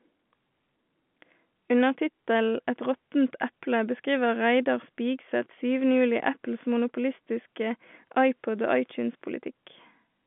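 No technical faults can be heard in this speech.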